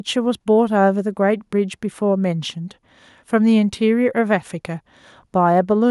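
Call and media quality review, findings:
Nothing to flag on this one; the speech recording came through without any faults worth noting.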